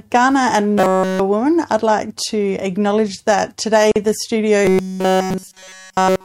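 From 0.78 to 1.20 s, just before "woman I'd like to", the speech turns into robotic sound from repeated short buffers: a rigid metallic buzz at 188 Hz. It comes back from 4.65 s, after "acknowledge that today the", and lasts to the end. The likely cause is that fresh audio arrived too seldom, so a fragment of about 5.3 ms was looped in place of the real signal, and nearly all of it was repeated. On a spectrogram this shows as flat, evenly spaced harmonics at multiples of 188 Hz. The waveform shows an identical cycle tiling the whole stretch.

At 3.92 to 3.96 s, right after "to acknowledge that today", a gap at a join of encoded pieces cuts 43 ms of silence into the flowing speech, and the sound then resumes where it left off. Separately encoded segments kept their start delay and end padding. The waveform shows a flat notch with abrupt, slightly smeared edges, and the spectrogram shows a thin vertical blank band.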